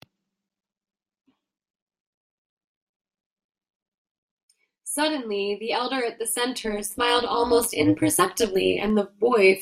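Speech that takes on a rough, robotic buzz from 6.59 to 8.90 s, with the level pulsing by about 11 dB at around 200 Hz: overlap-add ripple, where reassembled windowed frames overlap without summing to constant gain.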